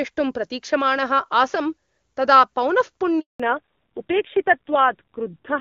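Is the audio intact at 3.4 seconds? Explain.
No. A handover gap runs from 3.20 to 3.40 s: while the call switched networks, no speech frames arrived, so the sound cuts out for 200 ms and whatever was said is lost. Right at 3.40 s, a fallback to narrowband begins and lasts to the end. The call dropped from HD Voice to an older codec, so everything above 4 kHz disappears and the speech turns duller and rougher, which fits a fall to a low-rate narrowband mode near 5.9 kbit/s.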